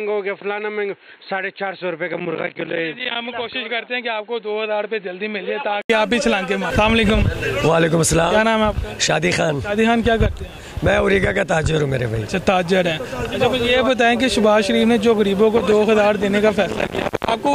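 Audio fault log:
0.00–5.90 s, input switched to a poorer device: dull, roughly 10 dB quieter sound with nothing above 4.2 kHz, then an 80 ms gap as it clears, likely from a change of input device.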